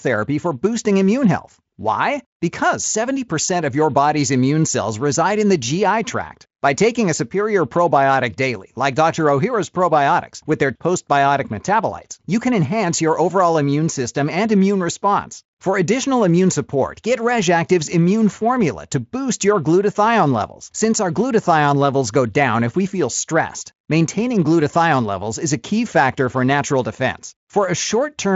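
Nothing here calls for comment: the speech comes through Speex with nothing above 7.7 kHz, which fits a setting of around 34 kbps, and there's nothing to point to along the way.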